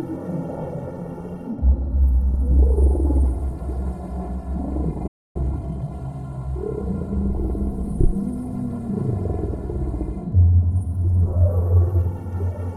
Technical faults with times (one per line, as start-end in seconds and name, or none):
5.07-5.36 playback stall
5.36-5.90 time-compressed catch-up